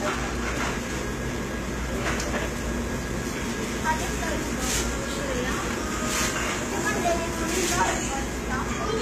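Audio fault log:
Throughout, HE-AAC compression, likely: the treble sounds gritty and metallic, as if synthesised, with nothing above 14.9 kHz. Only the lower spectrum is coded; upper bands are copied up and coarsely shaped, so harmonics misalign at the crossover, which fits roughly 20 kbps.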